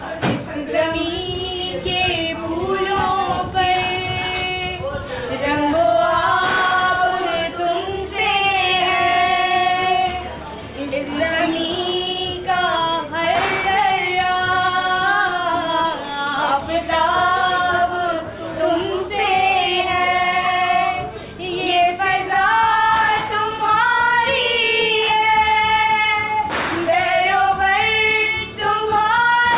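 No technical faults can be heard in this clip; it passed through a call path whose band ends at 4 kHz, which fits G.711 A-law at 64 kbps.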